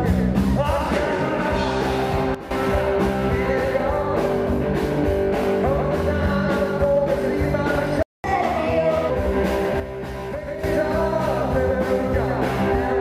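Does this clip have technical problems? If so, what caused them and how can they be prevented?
Yes, three kinds. There are two sudden gain jumps: the level drops by about 12 dB from 2.35 to 2.51 s, and by about 9 dB from 9.80 to 10.64 s. The background drops along with the sound, likely from a gain setting applied in one step without a ramp. Smoothing gain changes over a few milliseconds would prevent this.

A playback stall cuts the audio to silence from 8.03 to 8.24 s, roughly 214 ms. The player likely ran dry or its thread got blocked. A bigger buffer, or keeping the audio thread free of blocking work, would help.

Right after that, from 8.24 to 9.10 s, there's catch-up at higher speed: the audio runs 1.25 times fast, about four semitones sharp, while the player clears its backlog. Catching up more gently, or dropping the backlog instead, would avoid the chipmunk stretch.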